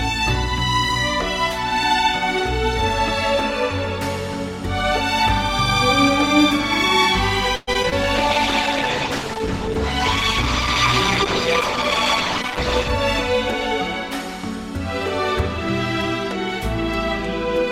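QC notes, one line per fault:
7.55–7.93 s, repeated packet loss (robotic sound): four gaps in quick succession, the longest about 119 ms. Around 160 ms was patched by stretching the preceding sound and about 60 ms simply drops out, so roughly 42% of this stretch is synthetic, giving a choppy texture with pieces missing.
8.17–12.96 s, call bitrate drop: the sound turns coarse and muffled for about 4.7 s as the encoder works with far fewer bits, consistent with a fall from around 96 to 12 kbps. At that rate Opus discards the upper frequencies and quantises what remains more roughly.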